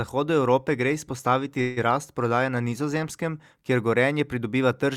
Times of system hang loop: none

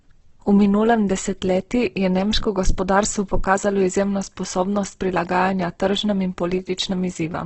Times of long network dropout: none

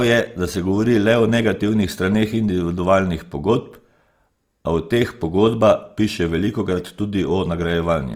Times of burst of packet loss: none

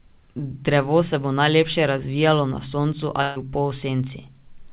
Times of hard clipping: none

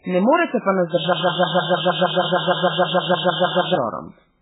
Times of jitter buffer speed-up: none

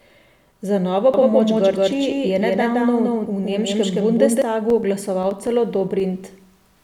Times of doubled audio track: 1.14-4.42

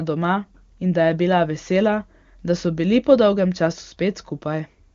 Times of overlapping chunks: none

